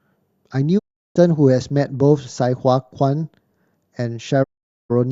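At 0.77 s and again at 4.42 s the speech cuts out in a digital broadcast dropout. The receiver lost valid frames and muted, fading over 20 ms into silence lasting about 0.36 s and 0.46 s. Waveform and spectrogram show sharp, near-silent gaps.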